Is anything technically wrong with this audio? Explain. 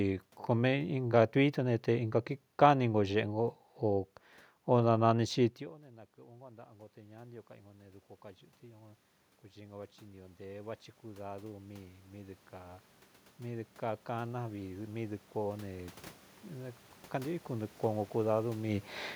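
Yes. From 6.15 s to 18.11 s there is automatic gain rising. After the input dropped by about 24 dB, the gain control slowly added about 19 dB to compensate. Unlike a talker simply moving closer, the room noise swells along with the voice.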